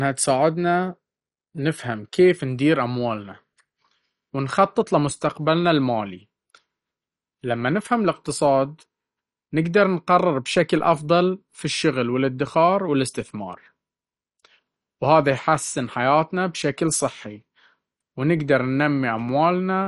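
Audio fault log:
Throughout: MP2 compression, likely the cause of the dull, gurgling texture heard across the whole clip. Nothing is present above about 11.3 kHz, since the encoder has switched off the upper sub-bands entirely for lack of bits, and the bands that remain flicker in and out and are coarsely quantised, giving a granular distortion on the speech. The degree of damage is plainly audible and fits a low rate around 48 kbps, much like weak digital radio.
10.79 s: DC step, heard as a single low thump between "نقدر نقرر" and "أفضل في الشغل والادخار". The waveform's zero line jumps abruptly to a new offset, and that sudden shift in baseline is what produces the thump, while the speech itself carries on unaffected. Afterwards the offset does not hold but drains away, behaving as though a high-pass around 2 Hz is pulling the baseline gradually back toward zero.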